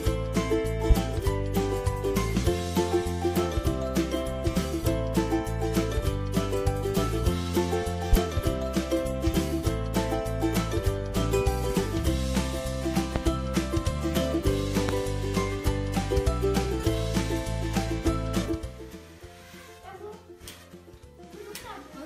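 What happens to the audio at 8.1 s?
A single loud pop occurs from 8.13 to 8.16 s, peaking roughly 20 dB above the surrounding audio. It is likely a brief voltage pulse from a switch, plug or static discharge entering the signal path, heard as one sharp thump over the continuing sound.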